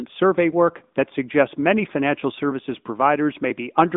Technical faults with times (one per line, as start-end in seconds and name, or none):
0.00-3.97 AMR narrowband mobile codec